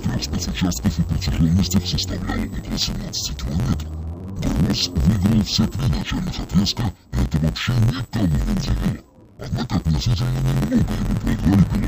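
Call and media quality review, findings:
Interleaved audio read as planar, entire clip. Probable component: the deinterleave or format-conversion stage. Each block of alternating left-right samples is split into halves and played as separate channels. The block length of 11.61 ms fits a 512-sample buffer. Result: dull, robotic sound with an 86.1 Hz buzz at the block rate and no clear octave drop.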